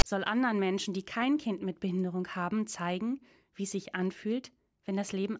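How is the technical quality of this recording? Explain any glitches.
The recording opens with a single glitch. From 0.00 to 0.03 s, a block of file tags was played as audio: the player read text metadata and its zero padding as samples. The text comes out as a loud, lopsided rasp with hard edges, followed by a brief stretch of silence from the padding.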